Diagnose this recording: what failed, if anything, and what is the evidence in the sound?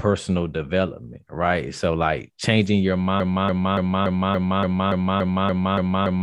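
A broken-record loop takes over from 3.2 s, right after "like changing your", and runs to the end. A 0.29 s fragment of speech repeats exactly, back to back, about eleven times, and the speech that should follow never arrives. The likely cause is a stall at the playback or streaming buffer, which kept re-sending the last block it held. An echo would decay and overlap, and a dropout stutter would vary. These repeats are identical and do not fade.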